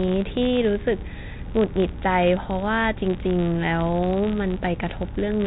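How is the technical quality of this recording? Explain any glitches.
The recording has one clear fault, and it runs through the whole speech clip. The sound is also band-limited to telephone quality, with nothing above 4 kHz, as expected from G.711 coding.

The fault is a filter restarted on every block. From start to finish, a filter loses its memory at each block boundary and starts again from silence. Each restart leaves a small click. These clicks repeat at about 86.1 Hz, which fits a 512-sample buffer. Together they form a steady buzz under the speech. The buzz grows louder as the speech gets louder.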